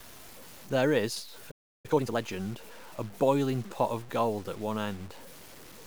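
All the way through, the speech has a grainy, gritty edge that tracks the sound, noise sitting only about 25 dB under it, likely low bit depth without dither, roughly 7-bit truncation. At 1.51 s it cuts to silence for about 330 ms until 1.86 s; that's likely a playback stall, the player starved of data. Right after, from 1.86 to 2.18 s, time-compressed catch-up rushes the backlog through at double speed, pitch unchanged.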